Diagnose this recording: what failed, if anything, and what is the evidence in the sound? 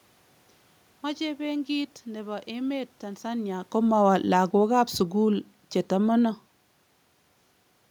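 The automatic gain control in the call processing stage failed by turning itself down: it judged the input too loud or its background noise too strong and cut its gain gradually, by about 4 dB, from 3.77 s to 6.51 s. The speech sinks steadily over that stretch, and the room noise sinks with it, which sets it apart from the level shift around 3 s, where the talker moved relative to the microphone and the background stayed put.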